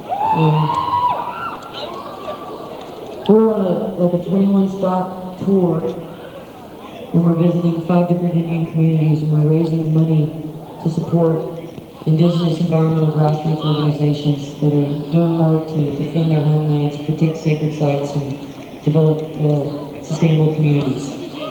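Four brief smears, each a short wobble where the sound briefly turns synthetic before blending back, fall at 1.55 to 1.59 s, 5.79 to 5.83 s, 8.63 to 8.67 s and 9.81 to 9.85 s. Each is short concealed packet loss: about 20 ms of audio never arrived in time, so the receiver filled the gap by extending what came just before, then crossfaded into the real signal that followed.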